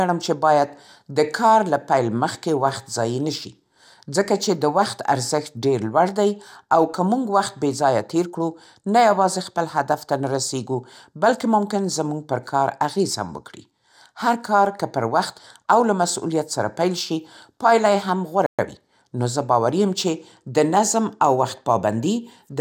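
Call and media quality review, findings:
Playback stall, 18.46 to 18.59 s: speech cuts to silence mid-flow for 123 ms, then resumes. Likely cause: the player's buffer ran dry or its output thread was blocked, so no samples reached the device until it recovered.

Time-compressed catch-up, 18.59 to 18.83 s: speech immediately after the gap sounds hurried at unchanged pitch. The player drains its backlog at 1.5x by cutting out short segments and cross-fading the joins.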